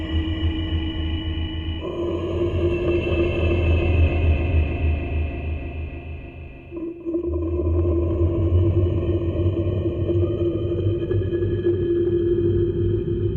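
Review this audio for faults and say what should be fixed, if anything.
Skip ahead at about 1.8 s: playback jumps forward with no audible gap, and roughly 0.7 s of sound never plays. That stretch was lost, either in transit or discarded by the jitter buffer when it overflowed, while later audio was already queued. The sound on either side of the jump is butted directly together, so the receiver's delay drops by about the same 0.7 s at once. To prevent it, give the jitter buffer enough headroom for arrival bursts and recover lost packets rather than discarding queued audio.

Jitter buffer speed-up from 4.01 to 4.62 s: the audio runs at about 106% speed with its pitch unchanged, which makes it sound hurried. The buffer was holding more audio than its target, as happens after delayed packets arrive together. To cut that excess delay, the receiver removed many short pieces of one or a few pitch periods in a row, about 50 ms in total. 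To prevent it, smooth network delay upstream so packets don't bunch up, and let the buffer shed excess delay more gradually.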